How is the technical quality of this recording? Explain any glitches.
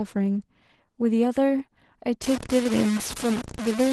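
The technical quality is pretty rough, with two clear problems.

The whole clip shows Opus voice compression at plainly audible levels, which fits roughly 16 kbps hybrid coding. The low-rate SILK core leaves the speech muffled and a bit hoarse and robotic.

From 2.24 s to the end there's heavy grit that tracks the speech, likely low bit depth without dither. Truncation to what sounds like about 4 bits puts the error only slightly below the speech itself.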